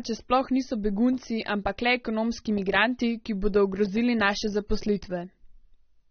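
From start to finish the speech carries plainly audible damage, with nothing present above about 6.3 kHz, so it sounds dull and muffled. Sibilants come out smeared and fizzy, and sustained vowels have a warbling texture. The likely cause is AAC compression at a low rate, which fits an AAC-LC stream around 24 kbps. The encoder lowered its cut-off and coarsely quantised or dropped bands it judged less audible, leaving these artefacts.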